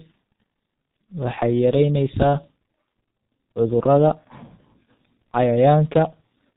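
Throughout, the speech has passed through a G.723.1 codec at a rate that fits roughly 6.3 kbit/s, heavily damaged. Nothing above 4 kHz survives and the coarse 30 ms frames smear transitions, so the voice sounds muffled and hoarse, with consonants blurred together.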